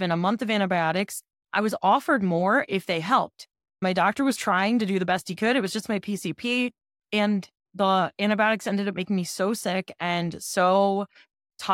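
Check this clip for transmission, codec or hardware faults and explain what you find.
No transmission, codec or hardware faults can be heard anywhere in the speech. Nothing in it calls for explanation.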